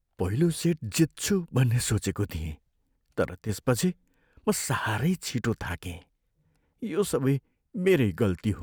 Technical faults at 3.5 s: one channel drops out

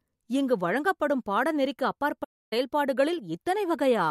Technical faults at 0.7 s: none

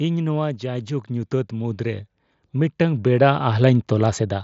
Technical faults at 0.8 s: automatic gain rising

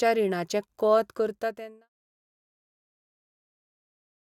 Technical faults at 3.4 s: none

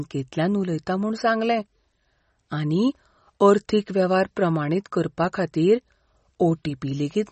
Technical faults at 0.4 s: MP3 compression

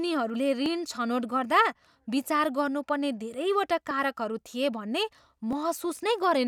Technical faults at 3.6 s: clock drift buffer slips

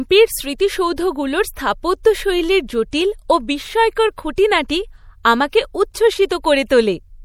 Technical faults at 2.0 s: MP3 compression; pre-echo

